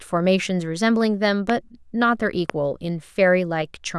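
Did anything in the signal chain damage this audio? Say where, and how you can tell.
Yes. Two loud pops sit on top of the speech, at 1.50 to 1.52 s and 2.50 to 2.52 s, each a single sharp transient roughly 15 dB above the signal while the speech continues underneath. The cause is likely a voltage step in the analogue wiring, such as a plug or switch contact.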